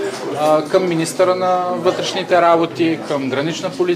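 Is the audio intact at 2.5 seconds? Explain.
Yes, at 2.5 seconds the audio is intact, with no dropout, click, distortion or other fault.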